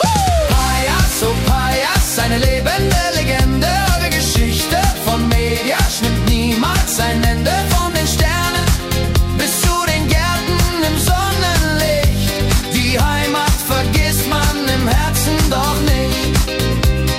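No technical faults can be heard anywhere in this recording.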